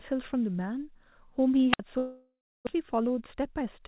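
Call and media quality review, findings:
Wireless microphone squelch dropout, 1.72–1.79 s: hiss swells, then roughly 58 ms near-silent hole as the receiver squelch mutes a fading RF signal, then the speech comes back.

Long network dropout, 1.98–2.77 s: buzzy concealment fill fading into dead silence, about 0.62 s of speech lost; likely jitter-buffer starvation, with playout delay shifting by about 50 ms.

Nothing heard above 4 kHz, which fits a narrowband G.711 mu-law call leg.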